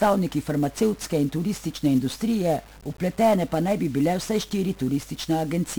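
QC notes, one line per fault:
Throughout, 1-bit DFPWM compression: heavy fuzzy crackle and treble-burying hiss that moves with the speech, one adaptive bit per sample, consistent with roughly 48 kbps, not a steady noise floor.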